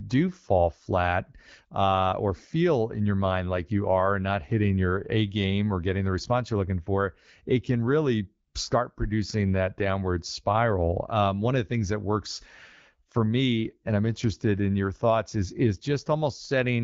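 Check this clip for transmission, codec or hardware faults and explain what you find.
There is one transmission fault, a short burst of AMR comfort noise, heard against speech carried by the AMR wideband (HD Voice) codec, whose light coding texture fits a 12.65 kbit/s mode.

From 8.47 to 8.53 s, for 60 ms, the sender's voice activity detector treated the signal as silence and stopped sending speech frames. The receiver filled that gap with synthetic noise built from a rough level and spectrum estimate, so the real background briefly gives way to a smooth, steady hiss.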